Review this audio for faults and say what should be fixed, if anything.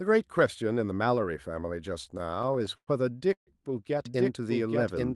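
From 2.05 to 2.89 s the speech drags and stutters through twelve brief stalls, the longest 95 ms. These are repeated stalls (stutter): late packets repeatedly emptied the jitter buffer, and about 0.2 s was filled in.

At 3.33 to 3.49 s the sound hangs, then drops to near silence for about 100 ms. This is a call audio freeze, likely from packets held up in transit.

From 4.06 s to the end an equally loud, dry copy trails about 0.7 s behind. This doubled audio track likely comes from a second, slower capture path.

To prevent these, stabilise the network path with a deeper adaptive jitter buffer and remove the duplicate capture route.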